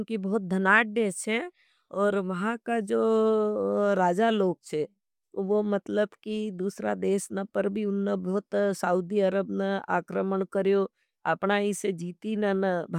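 Listening closely to the speech, nothing stood out as a technical fault at any point.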